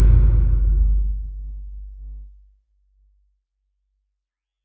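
Throughout, a noise suppressor meant for speech treats steady tones and tails as noise, swinging the level by roughly 20 dB, so the sound pumps and thins. The waveform envelope breathes unevenly, and sustained spectrogram bands break up. From 2.25 to 3.38 s, the noise suppressor cuts this sound, dipping it by about 10 dB for roughly a second. Held content sinks and decays end early, leaving a hollowed patch in the waveform and faded, truncated spectrogram traces. The call microphone processing leaves nothing above 8 kHz.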